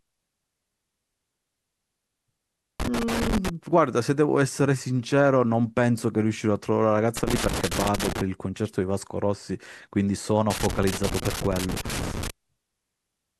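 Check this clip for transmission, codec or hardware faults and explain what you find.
Loose connector crackle is present in this speech, in three bursts: 2.80 to 3.49 s, 7.17 to 8.21 s, and 10.50 to 12.30 s. A worn contact makes and breaks as it shifts. This chops the signal, heard as irregular scratchy crackle.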